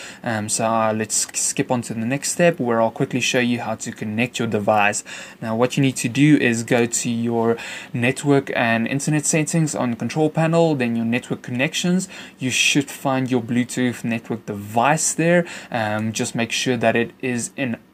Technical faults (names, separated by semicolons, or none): none